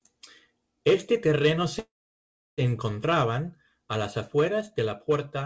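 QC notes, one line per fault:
1.79–2.61 s, call audio freeze: a brief fading fill gives way to 0.68 s of silence, likely from delayed packets draining the jitter buffer. The speech then resumes exactly where it stopped, with nothing lost, but running 0.79 s later.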